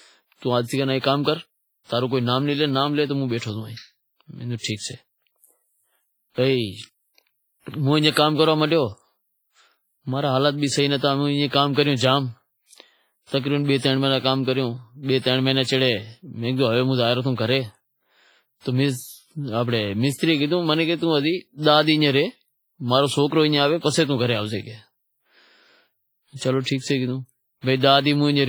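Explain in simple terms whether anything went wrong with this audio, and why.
Something did go wrong, and it lasts from start to finish. The speech sounds washy and ringing, with a hiss that rises and falls along with it. This is heavy damage, most likely from WMA compression squeezed too hard. Quiet detail gets thrown away, and smeared noise fills the gaps.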